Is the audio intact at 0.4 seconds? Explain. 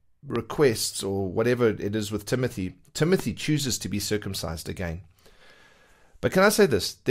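No. A loud pop lands right there, from 0.355 to 0.38 s: a single sharp click about 15 dB above the speech, which carries on underneath. It is likely a voltage spike, such as from a switch or static. The waveform shows a tall narrow spike, and the spectrogram a thin vertical broadband stripe.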